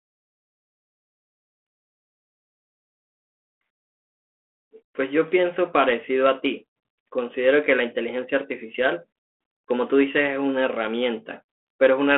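No technical faults are audible in this speech, which comes over a G.726 ADPCM telephone path at 32 kbit/s with the band limited to about 250 Hz to 3.4 kHz and only light coding roughness from the codec.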